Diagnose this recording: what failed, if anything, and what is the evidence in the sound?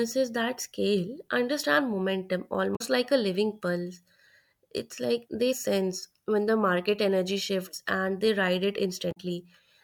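Damaged data in a compressed stream, codec stage: a brief glitch of about 90 ms at 2.73–2.81 s, after "that scale understand momentum", and at 9.09–9.17 s, after "and they ride it". Corrupted bytes made the decoder misread frames, lose sync and resume at the next header.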